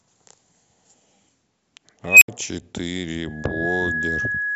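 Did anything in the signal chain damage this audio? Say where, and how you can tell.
Yes, two separate things got it. The first is an unstable filter somewhere in the processing, most likely a recursive EQ or similar DSP block in the call-processing stage. At 2.09 s a tone around 3 kHz appears and swells hard for about 128 ms until it clips, then the output drops out for about 69 ms before sound returns at 2.28 s. That runaway, clip, then dead-air sequence is what happens when bad coefficients push a feedback filter past stability until its numbers overflow and it resets.

The second is a loudspeaker feedback squeal, which is an acoustic and analogue-side problem. From 3.24 s a steady 1.7 kHz tone builds over a bit under half a second and then sits a few dB above the speech, running right to the end of the clip. A mic was picking up its own loudspeaker, and at 1.7 kHz the loop gain went past one, so that frequency kept feeding itself and nobody broke the loop before the recording stopped.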